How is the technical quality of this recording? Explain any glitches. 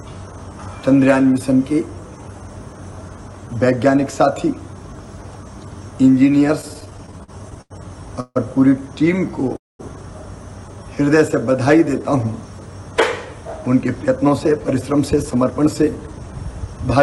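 The recording is marred by a cluster of network-delivery glitches in its later part, from about 6.6 s to nearly the end.

From 6.61 to 7.72 s there are repeated stalls (stutter): fourteen short gaps, the longest about 90 ms, covering roughly a fifth of that stretch. Packets were trickling in late, so the receiver kept running dry and stretching the last bit of sound to bridge each hole. Nothing's lost, but it drags and stammers. A milder bout follows at 9.16 to 9.56 s, with five tiny gaps of 9 ms or less.

Two call audio freezes sit in the same area. At 8.20 to 8.37 s the sound hangs for about 150 ms, trailing off into roughly 40 ms of silence before resuming. At 9.56 to 9.81 s it stops for about 230 ms, most of it (200 ms) dead silence. Both are likely packets held up in transit, with the jitter buffer emptying and the receiver smearing the last sound until delivery restarted. That inserts a pause rather than dropping anything.

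From 10.96 to 12.04 s there's a jitter buffer slow-down. The receiver padded in about 60 ms by repeating individual pitch cycles, so playback runs at about 95% speed with the pitch unchanged. It was rebuilding its reserve, and you hear drawn-out sounds.

Then from 13.75 to 16.97 s comes a jitter buffer speed-up. The buffer held more audio than it aims for, so the receiver trimmed small slices, around 0.3 s in all, to cut the backlog. The result plays at about 108% speed at normal pitch and sounds a bit rushed.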